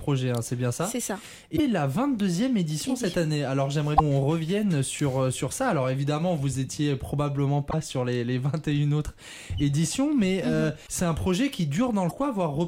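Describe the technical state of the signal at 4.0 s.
From 3.96 to 4.01 s the audio jumps ahead with a brief garbled disturbance, likely a broken MP3 bit reservoir: after a cut, frames fetch stale bytes from earlier 26.1 ms frames.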